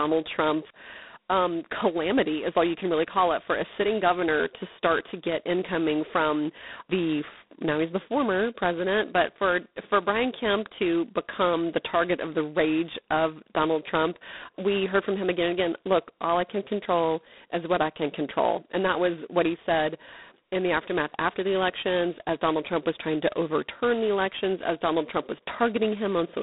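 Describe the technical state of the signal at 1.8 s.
At 1.8 s the speech carries G.726 ADPCM coding, present through the whole clip. Each sample is sent as a coarse step from a running prediction. The harsh, rasping hiss that rises and falls with the speech fits the 16 kbit/s mode. The band is narrowed to about 200 Hz to 3.7 kHz, and nothing passes above 3.9 kHz.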